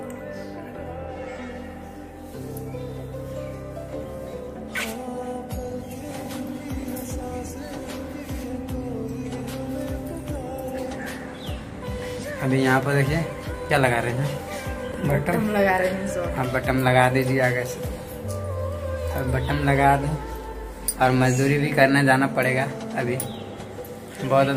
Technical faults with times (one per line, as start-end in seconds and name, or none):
4.95-7.03 train of clicks